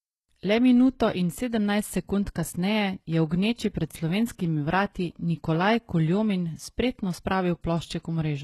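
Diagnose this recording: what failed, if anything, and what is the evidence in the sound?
Codec stage: likely HE-AAC compression throughout. Nothing above 12.3 kHz, and the rebuilt treble makes sibilants gritty and metallic, pointing to a stream near 16 kbps.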